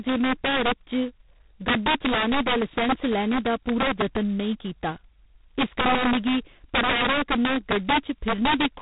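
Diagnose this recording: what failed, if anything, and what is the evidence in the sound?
Loud peaks across the whole speech clip break into violent, snapping cracks, far harsher than ordinary clipping, because the overshooting samples jump to the opposite extreme instead of flattening. This is integer overflow at the sample-format conversion or gain stage. The signal was driven about 9 dB past full scale, and roughly one sample in twenty exceeded the limit. Each excess value wrapped around the integer range rather than being saturated, turning every loud syllable into a sign-flipped spike.

A rasping, gritty hiss rides on the speech throughout, swelling and shrinking with its level, and nothing is heard above 3.8 kHz. That points to the codec stage, specifically G.726 ADPCM at a very low rate, likely 16 kbit/s judging by how heavy the damage is. Each sample is sent as a coarse difference from an adaptive prediction. 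With so few bits per step, the quantisation error becomes this level-following noise, and the telephone band removes everything higher.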